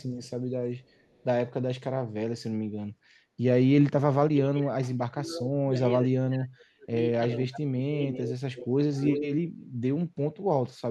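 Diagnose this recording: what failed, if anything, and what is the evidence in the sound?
A faint copy of the speech trails about 401 ms behind at 0.01–0.3 s and 0.8–1.24 s. A louder copy trails 344 ms behind at 7.3–7.58, 8.09–8.32 and 9.09–9.27 s, growing stronger each time. This is echo leak, likely from the far end's echo canceller in call processing letting loudspeaker pickup return.

The speech dips sharply, by up to roughly 40 dB, in pieces between 3.91 and 6.91 s, and by roughly 30 dB between 7.39 and 9.28 s. This is speech suppressed in double talk, likely from the echo canceller muting the talker while both sides spoke.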